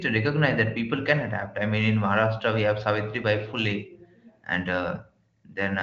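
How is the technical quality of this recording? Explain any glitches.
The recording has one fault, sample clock jitter, laid over a wideband HD Voice style signal whose content stops near 7.5 kHz.

From 0.97 s, just after "recognize that", to the end, the converter clock wavers by a few microseconds, so samples land early or late. The resulting hiss, roughly 30 dB below the speech, swells on loud, bright syllables and disappears in pauses, unlike a steady noise floor.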